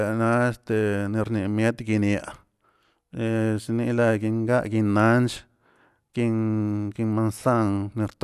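No technical faults are audible.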